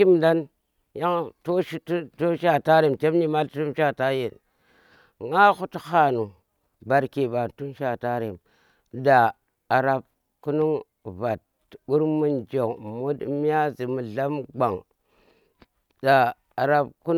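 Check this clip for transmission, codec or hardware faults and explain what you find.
Nothing turned up here: listening through this speech recording, there's no sign of any transmission, codec or hardware trouble to report.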